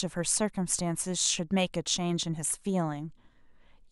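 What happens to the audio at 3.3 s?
Nothing goes wrong at 3.3 s; the speech carries on intact through that moment, with no dropout, click or distortion.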